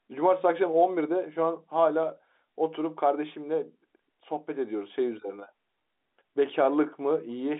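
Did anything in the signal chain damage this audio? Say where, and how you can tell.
No, nothing in the chain has damaged it: the speech sits in a 250 Hz to 3.6 kHz telephone band with nothing above 3.8 kHz, which is simply what G.711 A-law coding at 64 kbps delivers by design.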